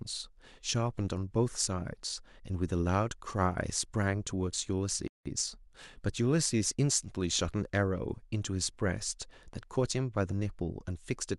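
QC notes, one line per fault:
5.08–5.26 s, playback stall: the speech cuts to silence for about 180 ms mid-flow, likely the player running dry or its thread getting blocked.
5.26–5.96 s, time-compressed catch-up: the player clears its backlog by splicing out small bits, so the speech rushes at 1.25x with normal pitch.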